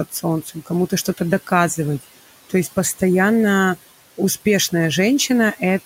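Across the whole speech clip the background pumps: it falls away in the pauses and swells back under each phrase. These are noise suppressor artifacts. The room noise, which sits about 17 dB below the speech, is being pulled down by about 16 dB wherever the processor decides no speech is present. Because that decision changes from frame to frame, the leftover noise is gated unevenly rather than staying steady.

The same processing also eats into the voice itself near the start. Between 0.09 and 0.24 s, between 0.42 and 0.71 s, and between 0.90 and 1.21 s, parts of the speech sound swallowed and faint, with the deepest dips about 15, 13 and 13 dB. Around a tenth of a second, a fifth of a second and a tenth of a second are affected in each stretch. This is speech cut by the noise suppressor: quiet speech energy was mistaken for background noise and turned down along with it.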